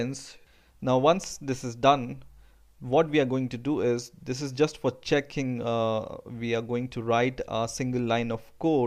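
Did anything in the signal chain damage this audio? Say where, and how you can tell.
No, nothing in the signal chain has left an audible mark on this audio. Listening through it, no stage from capture to playback shows any sign of damage.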